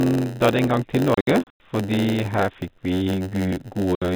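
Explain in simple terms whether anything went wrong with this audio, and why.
A couple of things went wrong. A block size mismatch (padded) runs through the whole clip. Each block gets a short stretch of silence tacked on, which adds a steady buzz at about 92 Hz and slows the speech to about 0.92 of its normal speed without changing the timbre.

There's also packet loss filled with silence. Between 1.14 and 1.60 s, about 210 ms of sound drops out in scattered holes, the longest 90 ms. Another 60 ms hole falls at 3.95 to 4.02 s. The gaps suggest packets of about 30 ms. The telephone-style narrow sound from the G.711 coding is simply what that format does.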